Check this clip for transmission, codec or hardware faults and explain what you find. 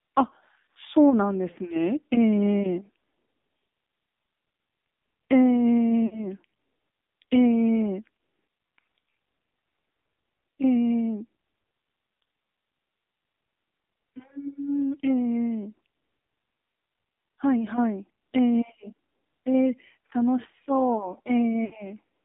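Two faults are present: the whole recording has passed through the AMR narrowband mobile codec, and it has lost AMR speech frames twice.

AMR narrowband codec, throughout: the speech is confined to roughly 250 Hz to 3.7 kHz, and the codec damage is plainly audible as a buzzy, synthetic tone, which points to one of the lower AMR-NB modes near 7.4 kbps. The codec rebuilds each 20 ms frame from a vocal-tract filter and a handful of excitation pulses, so fine detail is lost. On a spectrogram, everything above about 3.7 kHz is empty and harmonics look smeared. The waveform looks coarse but not clipped.

Lost AMR speech frames, at 6.06 to 6.28 s and 21.66 to 21.77 s: frames failed their checksum, and the decoder filled each gap by repeating the last good pitch and filter settings with falling gain. About 60 ms of real speech is missing each time, which fits three 20 ms frames. The sound briefly smears and dips, then returns rough for a moment. 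On a spectrogram this shows as frozen, repeated harmonic bands that fade. In the waveform it appears as a short, tapering, oddly uniform stretch.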